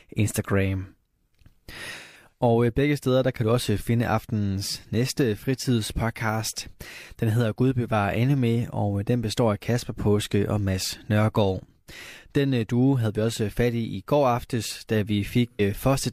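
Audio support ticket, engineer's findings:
AAC frame loss with concealment, 1.97–2.33 s and 15.47–15.61 s after "går aftes da". Smeared, phasey fill from the decoder's last good spectrum, longest gap about 150 ms. Unlike a hard dropout or clicks, no silence or discontinuity.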